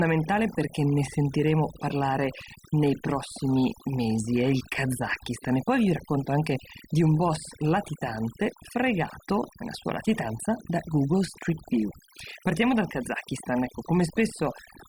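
Overdone noise removal runs through the whole speech recording: bands near the noise estimate are pulled down or cut, so the background drops and breaks up into twinkling specks. Unlike a noise gate, it works band by band, not on everything at once.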